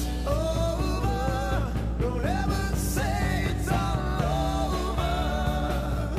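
Mains hum runs from start to finish: a steady 60 Hz tone with a few low harmonics, sitting at roughly the same level as the wanted sound. Power-line current is leaking into the signal path, typically through a ground loop or a nearby transformer.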